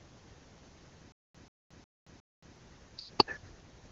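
A speech recording passed through the AMR wideband (HD Voice) codec, its content stopping at about 7.6 kHz, breaks into a stutter with silent gaps from 1.12 to 2.56 s. The same 136 ms burst repeats four times, each followed by 224 ms of dead silence, a steady 360 ms cycle. The likely cause is a stalled player or stream replaying its last fragment at each retry, losing the audio that should have played in that interval. A spectrogram would show identical blocks separated by empty columns, and a waveform would show flat, near-silent stretches between the copies.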